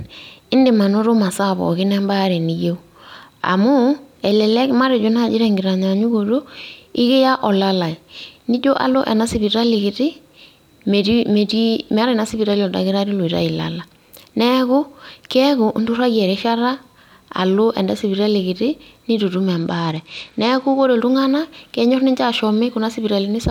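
A speech clip in which, from 19.55 to 20.84 s, just after "sipitali kiti nitu itum", the treble goes dull and a gritty grain rises until "ore iltunganak kenyor ninche". This is a Bluetooth SBC bit pool drop: the encoder starved the upper sub-bands and quantised the rest coarsely, which fits a cut from bit pool 28 to 13, near 102 kbps.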